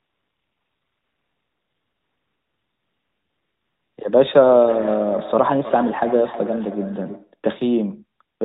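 From the start to 3.98 s you get AMR comfort noise. The phone decided nobody was talking, stopped sending speech frames, and the far end filled the gap with synthetic hiss built from a rough sketch of the background. So instead of the real room you hear a smooth, steady noise bed. The same thing happens briefly again from 8.36 to 8.40 s, where the noise cuts in for about 40 ms.

From 4.29 to 7.39 s there's feedback echo between two devices. A second device in the room is on the same call and is playing this side's audio back into the microphone, and neither echo canceller can remove the other device's output. Each bit of speech comes back roughly every 300 ms, thinner and ringier, peaking about 13 dB below the direct speech.

All of this sits inside narrowband AMR-NB audio with nothing above 4 kHz and only light codec colouring, which fits the 12.2 kbps mode.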